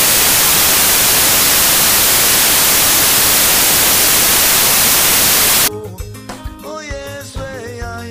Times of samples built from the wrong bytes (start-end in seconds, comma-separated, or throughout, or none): 0.00-5.68